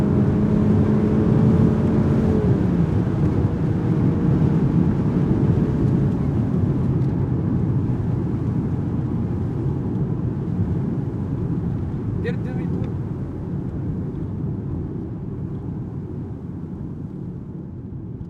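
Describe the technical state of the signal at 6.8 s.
At 6.8 s the sound comes through intact, with no dropout, clipping, distortion or other technical fault at that moment.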